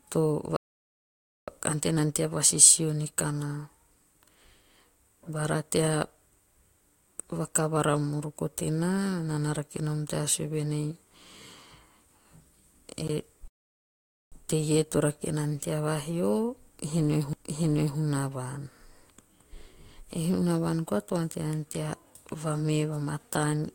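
At 0.56 s a rebuffering stall cuts the speech to silence for about 0.91 s; playback ran dry, then resumes exactly where it stopped, adding time. At 13.08 s a CD skip gives a brief tick and mute of roughly 15 ms as the laser jumps to another turn of the spiral, landing elsewhere in the speech. A second stall follows at 13.48 s, silent for 0.84 s before continuing seamlessly. Another CD skip at 17.33 s mutes very briefly and jumps position.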